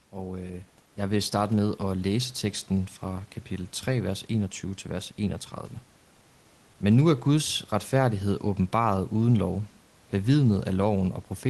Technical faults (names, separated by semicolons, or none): none